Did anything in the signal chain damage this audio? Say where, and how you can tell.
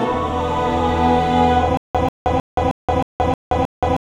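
Yes. From 1.77 s to the end, the audio shows a stutter with silent gaps: a 139 ms fragment repeats seven times, each followed by about 174 ms of digital silence, giving a steady 313 ms cycle. The stage is likely playback or stream buffering, where the player stalled, replayed its last fragment on each retry, then ran dry. On a waveform, identical blocks alternate with flat lines. On a spectrogram, matching vertical slabs are separated by empty columns, and the material that should have played there is lost.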